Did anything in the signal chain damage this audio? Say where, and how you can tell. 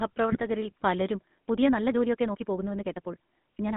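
Yes. The codec stage shapes the whole clip. It is the GSM full-rate codec. The band runs from about 150 Hz to 3.6 kHz, and a buzzy, gravelly roughness is plainly audible throughout. The excitation is coarsely coded, which fits a 13 kbps full-rate link.

The network stage adds GSM bit errors from 0.32 to 0.43 s. The sound breaks into squawks, pops and gargling there. Corrupted filter, pitch or gain values distort the spectrum and level frame by frame. This fits an error rate near 2 percent over a handful of frames.

From 1.12 s to the end, the pace jumps to about 1.67 times faster while the pitch stays put. The sound turns rushed. The likely cause is a time-stretched section, where software squeezed the audio by dropping short pieces.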